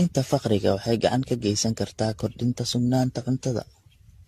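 Speech runs through the whole clip with a swirly, hollow, smeared quality and softened consonant attacks, consistent with generation loss: the audio was likely decoded and re-encoded around fifteen times through a lossy AAC-LC chain, at a rate that fits roughly 64 kbit/s, each pass re-quantising on a shifted frame grid so the errors pile up. A spectrogram would show nothing above 14.1 kHz, with smeared, blurred onsets in the waveform.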